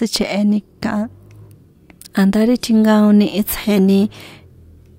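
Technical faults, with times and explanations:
No technical faults can be heard in this speech clip.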